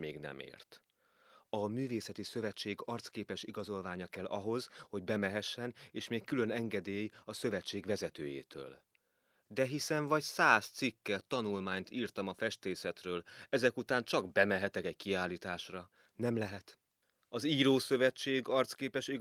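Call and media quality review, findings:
No audible faults found in the speech on review; nothing to raise against the capture or transport path.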